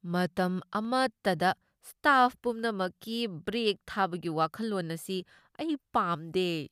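Dropped samples at 0.85 s: a fraction of a millisecond of the speech likely went missing, so the waveform jumps abruptly, giving one sharp click.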